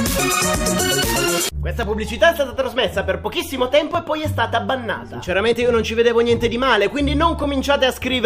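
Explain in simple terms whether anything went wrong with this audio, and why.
At 3.95 s the audio makes a tiny jump forward. A very short piece, around five thousandths of a second, is missing, and the sound on either side is joined straight together. There is no gap of silence. The cause is likely a dropped buffer (overrun). The recording program fell behind for a moment. Before it could collect that small batch of sound, the hardware wrote new sound over it, so that piece was lost.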